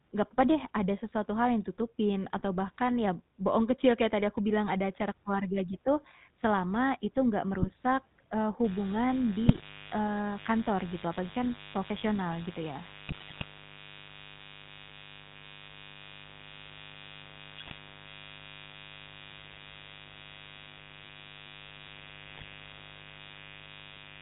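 The whole clip carries the GSM full-rate codec sound, which fits the 13 kbps full-rate coder: the speech is band-limited below 4 kHz and has a buzzy, gravelly texture from the coarse pulse excitation. That roughness is plainly audible throughout.

GSM bit errors first appear at 2.36 to 2.43 s, then at 7.54 to 7.82 s. Corrupted filter, pitch and gain parameters distort the decoded frames, so the speech breaks into brief squawks, pops and gargling.

From 8.64 s to the end, a 50 Hz mains buzz sits under the speech at roughly 20 dB below it. Sharp switching spikes twice per mains cycle produce harmonics reaching several kilohertz. The result is a steady, raspy buzz rather than a smooth hum.

Within that buzz, further GSM bit error bursts occur at 9.46 to 9.63 s, 13.08 to 13.44 s, 17.58 to 17.73 s and 22.34 to 22.45 s. Each one produces the same squawking, popping decoder garble.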